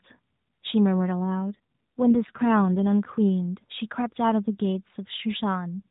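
From 1.54 s to 2.87 s there's an AMR rate drop. The speech turns buzzier and more synthetic, which fits the mobile link falling from around 12.2 kbps to around 5.9 kbps. Bandwidth holds and nothing cuts out, and the light narrowband AMR character returns afterward.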